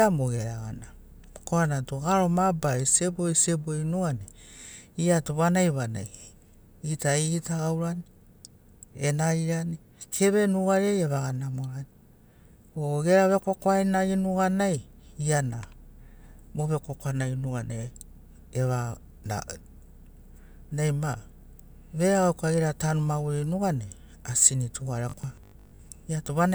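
From 25.10 to 25.80 s the speech collapses into robotic sound from repeated short buffers: a rigid, metallic 50 Hz buzz that loosely tracks the words. About half the audio is replaced by repeats, likely a 20 ms buffer replayed while fresh audio arrived too slowly.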